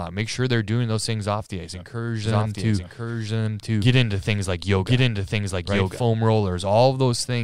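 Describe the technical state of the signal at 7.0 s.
At 7.0 s the signal is intact, with no audible technical fault at that moment.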